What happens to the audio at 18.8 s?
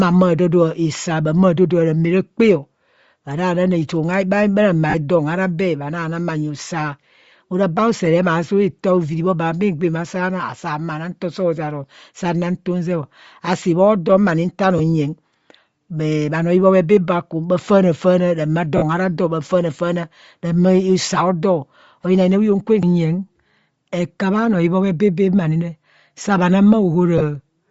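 From 18.77 to 18.83 s the speech briefly smears into a grainy, hissy blur. These are lost LE Audio frames: the LC3 decoder covered a gap of about 50 ms, consistent with five 10 ms frames, by replaying the last spectrum with randomised signs. Underneath, the whole passage has a breathy, granular edge with thinned-out highs. This is plainly audible damage, likely from Bluetooth LC3 compression, whose degree fits a bitrate near 32 kbps, zeroing much of the upper spectrum and filling it with noise.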